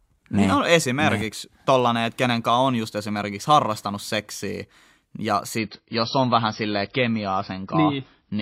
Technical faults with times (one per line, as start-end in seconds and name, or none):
5.58-8.42 adaptive stream at a lower bitrate